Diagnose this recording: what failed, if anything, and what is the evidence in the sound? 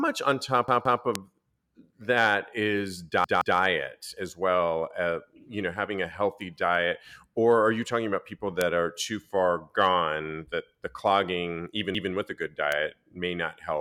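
The playback driver fell behind and hit a repeated buffer three times. Around 0.68 to 1.02 s and 3.24 to 3.58 s, a 171 ms chunk of speech plays twice more with hard joins. At 11.95 to 12.12 s it repeats once. That length fits an 8192-sample buffer, and nothing seems skipped afterwards.

There are also four bit error spikes, single sharp ticks at 1.15, 6.41, 8.61 and 12.72 s. Each is a flipped bit in memory or on a digital link, hitting one to three samples. The value jumps by a power of two and snaps back, so the click has nothing to do with the speech.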